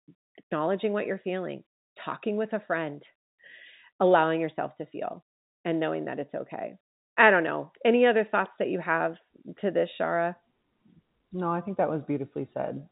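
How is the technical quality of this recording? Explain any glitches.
No glitches can be heard anywhere in the recording. The speech arrives over G.711 telephone coding, so the sound stops at about 3.8 kHz, with at most a faint trace of the format's level-following quantisation noise.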